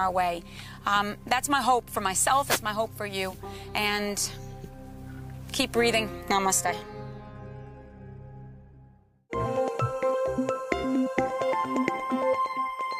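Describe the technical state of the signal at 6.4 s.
At 6.4 s the signal is intact, with no dropout, clipping, glitch or other fault to be heard at that point.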